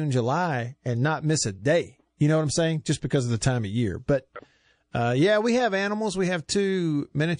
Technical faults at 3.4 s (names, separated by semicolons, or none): MP3 compression